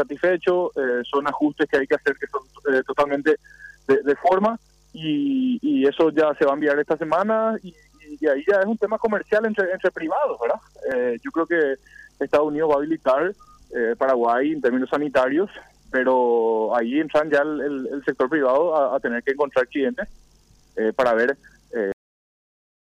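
At 21.92 s the audio has a cut-off end: the sound stops abruptly in the middle of an event rather than fading or decaying, and the remaining 0.95 s is dead digital silence. The final buffers were never written out, so playback simply runs out of data. On a waveform the trace drops from full activity to a flat line in a single step, and a spectrogram shows energy ending along a sharp vertical edge with no tail.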